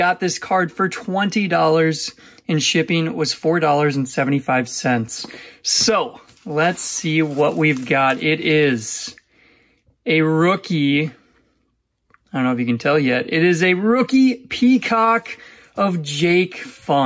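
From start to finish the level pumps: the gain ducks by around 5 dB under every loud sound, so loud and soft passages sit close together and everything feels squashed. This is gain pumping, most likely from input gain set far too high with a fast limiter or compressor reining it in. Unlike a noise gate, the level never cuts to silence. The call's microphone processing band-limits everything to 8 kHz.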